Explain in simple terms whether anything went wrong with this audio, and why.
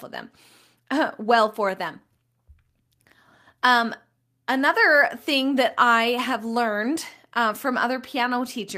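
Nothing went wrong with this speech recording: at no point does the signal carry a technical fault that a careful listener can pick out.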